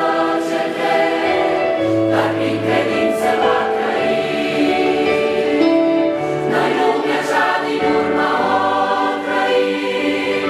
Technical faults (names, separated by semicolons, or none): none